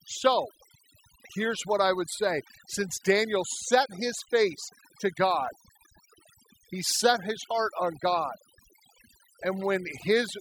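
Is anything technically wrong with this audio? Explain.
Yes, the speech suffers from overdone noise removal throughout. Bands near the estimated noise floor are pushed down individually, taking quiet speech detail with them, so the background drops and breaks up into twinkling specks. A noise gate would instead mute everything at once.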